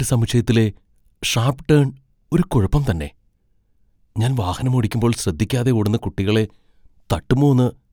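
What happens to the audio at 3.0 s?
Nothing goes wrong at 3.0 s; the speech there plays through intact, with no dropout, glitch or other fault.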